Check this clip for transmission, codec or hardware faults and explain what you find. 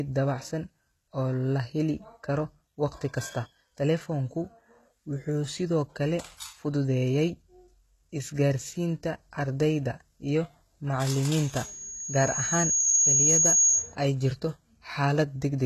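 Two faults are present in this speech clip: codec damage throughout and a feedback squeal near the end.

HE-AAC compression, throughout: nothing above 12.3 kHz, with gritty, lispy sibilants from treble rebuilt by band replication, likely a low-bitrate encode around 16 kbps.

Loudspeaker feedback squeal, 11.32 to 13.96 s: the microphone re-amplifies its loudspeaker until a 6.4 kHz tone swells over about two seconds, ending roughly 10 dB above the speech.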